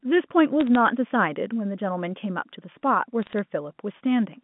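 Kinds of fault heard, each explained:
Bit errors on a digital phone line: a small fraction of flipped bits corrupts single samples, so brief bursts of sharp ticks and crackle sit over the speech near 0.6 s and 3.2 s.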